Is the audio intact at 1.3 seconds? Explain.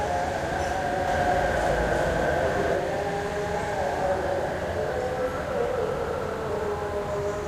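No. From 1.08 to 2.76 s the audio is a doubled audio track, likely because the same signal reached the mix twice, once directly and once through a slower path. The late copy trails by roughly 400 ms at about the same level as the original, so at 1.3 s every event is heard twice. The repeat is full-band and dry, with no decay or room colour, and it cuts in and out abruptly at the span's edges.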